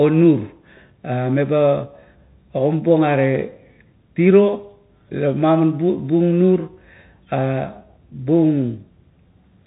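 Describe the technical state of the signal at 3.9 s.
At 3.9 s the speech carries the Bluetooth CVSD headset codec, present across the whole clip. A one-bit adaptive-step delta modulator, consistent with a 64 kbps CVSD stream, leaves nothing above 3.8 kHz, with plainly audible granular hiss, scratchy sibilants and slope-overload distortion.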